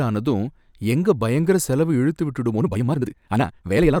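Software likely squeezed the speech to twice its speed from 2.51 s to the end at 4.0 s, right after "எங்க பயங்கர செலவு இழுத்து", dropping short pieces to hold pitch. This time-stretched section turns abruptly rushed while the pitch stays unchanged.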